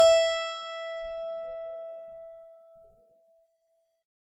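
From start to finish the music sounds swirly, smeared and hollow, with blurred attacks and more shimmer than a single lossy encode would leave. This is likely generation loss: around ten successive AAC-LC passes at about 96 kbit/s, each requantising on a shifted frame grid.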